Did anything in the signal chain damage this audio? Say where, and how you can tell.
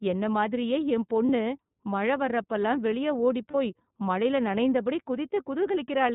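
Yes. iLBC codec throughout: narrowband speech with nothing above 4 kHz, and a slightly rough, synthetic texture that fits iLBC at 13.33 kbps with 30 ms frames.

Lost iLBC frames at 1.26–1.29 s after "என்னை மாதிரியே என்" and 3.51–3.55 s between "மழை வர்றப்போலாம் வெளியே ஓடிப்" and "போய் மழையில் நனைந்தபடி". Each sounds like a brief held, buzzy vowel, consistent with one dropped network packet. The decoder repeats the last pitch cycle, then recovers immediately.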